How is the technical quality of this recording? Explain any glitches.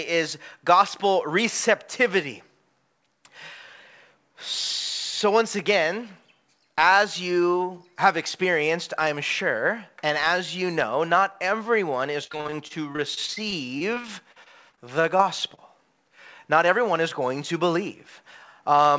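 The recording has one clear glitch. It went through a call path whose audio stops at 8 kHz, which fits a wideband codec such as G.722.

From 12.24 to 15.59 s, just after "know not everyone is", the speech turns choppy and robotic. This is repeated packet loss: about two dozen short holes, the longest around 40 ms, each patched by stretching the preceding sound. Roughly 15% of that stretch is filled in this way.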